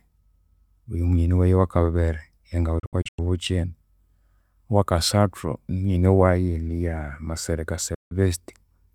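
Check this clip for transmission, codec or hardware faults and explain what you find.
Digital broadcast dropout at 2.79 to 3.19 s and again at 7.94 to 8.12 s. The receiver stopped getting usable frames, or rejected ones that failed their checksum, and muted until good data returned. In the first event about 224 ms of speech vanishes in several short holes scattered over 384 ms, the longest 96 ms. The second removes 160 ms. Each cut fades out and back in over 8 ms, and the gaps fit whole frames of about 32 ms.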